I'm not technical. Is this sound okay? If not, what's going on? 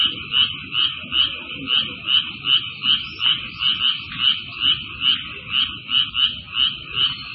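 No, it's been squeezed hard the whole way through, most likely by MP3 compression. Everything above 5.5 kHz is gone, so it sounds dull and muffled, and the faint details flicker in and out, giving a watery, swirly quality with smeared, blurry attacks.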